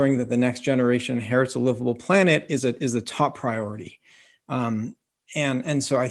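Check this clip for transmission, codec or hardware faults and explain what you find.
Nothing stood out on listening to the speech in this clip.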